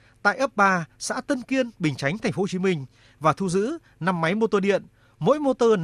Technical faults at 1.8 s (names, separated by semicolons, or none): none